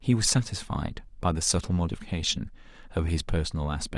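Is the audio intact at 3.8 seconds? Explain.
Yes, at 3.8 seconds the speech plays through cleanly with no audible dropout, click, distortion or other fault.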